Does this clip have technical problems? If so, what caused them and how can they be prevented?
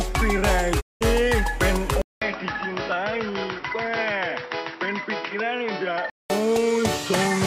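Yes. From 0.80 to 1.03 s the sound fades out over about 20 ms and goes silent, then resumes: a digital broadcast dropout. The receiver muted on bad or missing frames, and the lost stretch of roughly 190 ms fits about six frames. Stronger reception or antenna placement, or more robust error protection, would prevent this.

At 2.02 s there is a 200 ms silence, after which the sound turns dull with nothing above 5.7 kHz, becomes a few dB quieter, and carries a new background noise until 6.30 s. The likely cause is an input switched to a poorer device, such as a headset call profile. Locking the input device during recording would prevent this.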